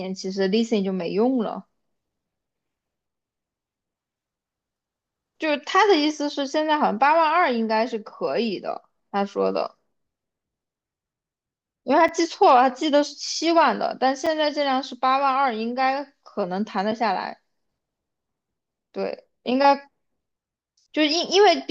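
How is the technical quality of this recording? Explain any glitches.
The recording has two brief dropouts in the speech, each a block of digital silence, at 12.08 s and 14.26 s. Each hole lasts about 5.3 ms, a length that fits a 256-sample buffer the program did not fill in time, so zeros were output in its place. The signal cuts out and comes back with no fade, and that abrupt edge turns each gap into a small tick. On a waveform each one is a short flat line. On a spectrogram it is a narrow blank slot bordered by thin vertical streaks of broadband energy where the cuts occur.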